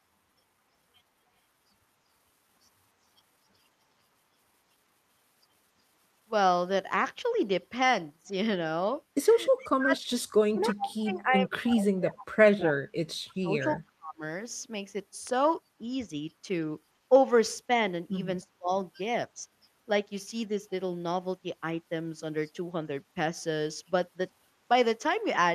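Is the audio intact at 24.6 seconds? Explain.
Yes, the audio is intact at 24.6 seconds, with no fault present at that moment.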